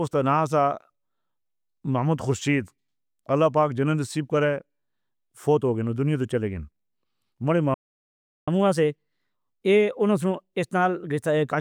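At 7.74 s the player most likely ran short of buffered data or had its output thread held up, and this shows as a playback stall. The speech cuts off in mid-flow and the output falls completely silent for about 0.73 s, until 8.48 s. Then the sound returns.

From 8.48 s to 11.48 s the player works through the backlog left by the stall by resampling it, producing a catch-up at higher speed. For those three seconds the speech runs at 1.1 times normal speed and sits roughly a semitone and a half sharp, so it sounds slightly hurried and higher-pitched. At 11.48 s both speed and pitch drop back to normal.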